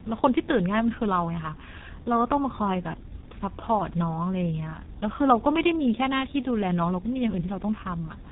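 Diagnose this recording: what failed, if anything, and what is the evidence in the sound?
The failure is at the codec stage: tandem speech coding across the whole clip. The speech has been through two lossy speech coders in a row, and it sounds rougher, more muffled and more warbly than a single low-rate coder would leave it. Nothing is present above 3.8 kHz. The sound fits a CVSD leg passed through G.711 A-law and then into G.723.1 at about 6.3 kbit/s. Each coder re-encodes the previous one's artefacts as if they were real speech, so the damage compounds.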